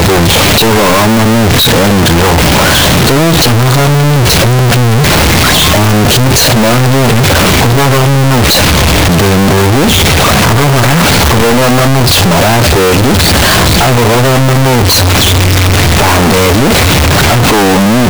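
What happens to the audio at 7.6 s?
At 7.6 s you're hearing the same thing that runs through the whole clip: the speech is slammed into a harsh, squared-off waveform sitting at an almost fixed, high level, with the background noise as loud as the talking. Pitch still comes through. That's the signature of float read as integer. The 32-bit float samples were likely interpreted as 32-bit integers, so sign and exponent bits dictate level, not the actual signal.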